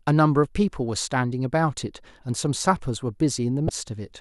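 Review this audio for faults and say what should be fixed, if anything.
A brief glitch at 3.66 to 3.69 s points to damaged data in a compressed stream: corrupted frames made the decoder lose sync and resync. Protect the stream with checksums or error-resilient transport, and verify file integrity before decoding.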